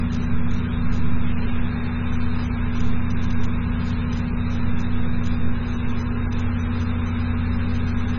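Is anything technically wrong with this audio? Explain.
Yes. Throughout, nothing is present above 6.9 kHz and the sound is heavily watery and swirly, with smeared attacks, likely from MP3 compression at a very low bitrate, around 16 kbps. Starved of bits, the encoder cuts the treble and lets weak frequency lines drop in and out between frames.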